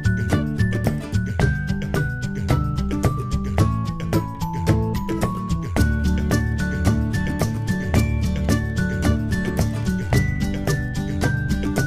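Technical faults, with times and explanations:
No technical faults detected.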